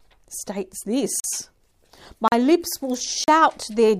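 At 1.20, 2.28 and 3.24 s, a block of digital silence lasting 40 ms replaces the sound with zeros. The sound cuts out and back in abruptly with unfaded edges, unlike a smoothed dropout.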